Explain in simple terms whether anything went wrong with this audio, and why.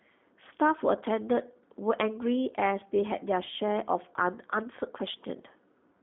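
The speech sounds thin, muffled and plainly robotic from start to finish, like a call over an internet phone line. That comes from the G.729 codec, a voice-call format that squeezes speech into very little data by rebuilding it from a rough model of the mouth and throat plus a few pulses. Here it keeps only the range from roughly 200 Hz up to about 3.6 kHz, so the crisp high sounds and the deep low end are gone, and the rebuilt speech has an audible synthetic roughness.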